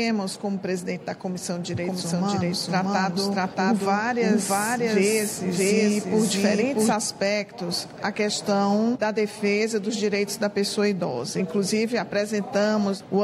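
From 1.77 s to 6.93 s the sound is doubled. A second copy of the same audio plays underneath, roughly 0.7 s behind and at about the same level. It is a doubled audio track. The copy is full-band and dry, with no decay or room colour. It cuts in and out abruptly at those points. The likely cause is the signal being captured twice, once through a slower path.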